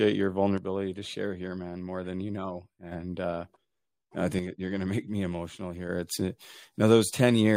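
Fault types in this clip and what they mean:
One channel drops out: the speech level falls abruptly by about 6 dB from 0.58 to 2.92 s and again from 4.39 to 5.89 s, likely one stereo channel lost before the mono sum. The waveform envelope steps down sharply, the spectrogram dims evenly.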